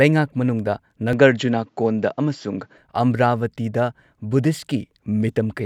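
An input switched to a poorer device runs from 1.13 s to 2.78 s of this speech. Without any gap, the voice suddenly loses everything above 7.6 kHz and turns duller, with a faint new noise far below the speech. The loudness stays about the same. This is likely the recording changing to a narrower-band microphone or headset mid-stream. At 2.78 s the full, brighter sound returns.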